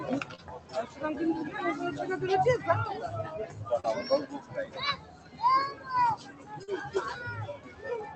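From the start the sound pumps and thins: sustained parts and decaying tails keep sinking while sharper onsets push through, with the overall level swinging by roughly 15 dB. This is a noise suppressor applied to music or sounds. A suppressor tuned for speech treats steady, tonal or reverberant material as background noise and keeps pulling it down, so the level never settles.

The first deep dip runs from 0.24 to 1.0 s, where the sound cut by the noise suppressor falls by about 9 dB. Held portions sag and their decay is clipped short. The suppressor has judged this stretch to be noise and attenuated it harder than its surroundings.

Inside that dip, at 0.35 to 0.40 s, comes a short smeared blip, a moment where the texture wobbles before rejoining. This is short concealed packet loss. About 20 ms of audio arrived too late to decode, and the receiver bridged the gap with roughly 25 ms of synthesised continuation, extending the preceding sound before crossfading back into the real signal.

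The same smear returns at 3.80 to 3.86 s, this time a little longer. About 40 ms went missing and roughly 37 ms was filled with continued sound.

From 4.33 to 4.76 s the suppressor dips the sound again by about 8 dB. A second cut follows from 4.96 to 5.40 s at about 9 dB. Sustained material sinks and tails are truncated in both.

A shallower cut of about 7 dB follows at 6.20 to 6.51 s.

A third concealment smear lands at 6.64 to 6.69 s, where about 40 ms was lost and roughly 38 ms was filled with extrapolated sound before blending back.

The last suppressor cut, about 8 dB, sits at 7.56 to 7.85 s and again hollows out the held part of the sound.

Throughout, the absence of content above about 8 kHz reflects the normal band limit of the call codec path.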